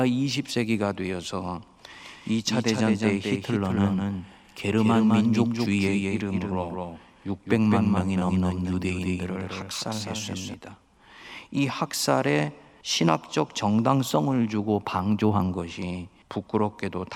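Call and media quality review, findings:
Doubled audio track, 2.06 to 10.54 s: speech repeats about 200 ms behind itself, around 5 dB quieter, full-band, no decay or room colour, abrupt start and stop. Likely a second capture via a slower path mixed in alongside the original.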